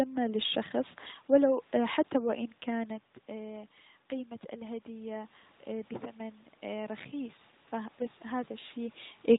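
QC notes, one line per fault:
2.70–9.04 s, automatic gain rising: The talker moves away from the microphone shortly before this, and the input drops by about 13 dB. Just after "حتى وان" the automatic gain control reacts to the quieter signal. It lifts its gain slowly, by about 8 dB over more than six seconds. Voice and room noise swell together, because the gain acts on everything the microphone picks up. The rise is smaller than the drop, so the level stays below where it started.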